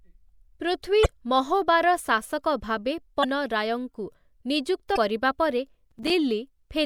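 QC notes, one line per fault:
1.02–1.06 s, 3.21–3.25 s and 4.93–4.97 s: damaged data in a compressed stream. Each is a brief disturbance of about 40 ms cutting across the speech. Corrupted bytes in the encoded stream make the decoder misread or discard the frames at those points. It loses frame sync and skips ahead to the next valid header.
5.91–6.10 s: processor overload crackle. A gritty tearing of about 0.2 s rides on the speech and then stops. The processor is failing to deliver audio buffers on time, and the pattern fits buffers of around 5 ms with a handful of deadlines missed in succession. Each missed buffer is filled with silence, so the stream becomes a rapid chain of hard-edged gaps, heard together as a burst of crackle.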